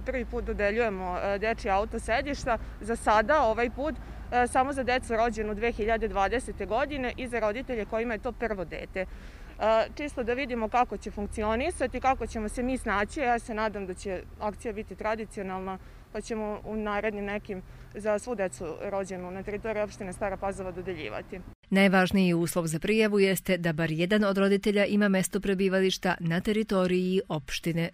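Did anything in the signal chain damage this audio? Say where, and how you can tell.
No, nothing I can hear points to damage at any stage of the chain, so there's no fault to chase down here.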